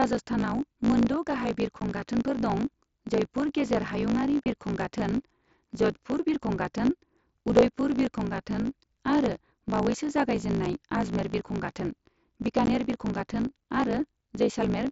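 From start to end, a steady buzz at 54.4 Hz sits under the speech. This is a block size mismatch (truncated). One stage writes longer blocks than the next one reads, so the tail of every block is dropped. The buzz fits a 1024-sample write. Because audio is discarded, the speech runs 1.16 times fast, yet its timbre stays. Each chopped block edge repeats at the buzz rate.

Four short holes break the speech. This is unconcealed Bluetooth headset packet loss. Packets between headset and phone went missing, and nothing filled the gaps. At 1.80 s, just after "मोनद' गाहाय", about 15 ms drops out. At 4.44 s, after "गेजेर हायुंआरि", the gap is 22.5 ms, the longest. At 10.65 s, just before "आजमेर बिरखं", a 7.5 ms gap opens. At 12.66 s, 15 ms is lost. Each hole has abrupt edges, heard through the light grain of the mSBC link.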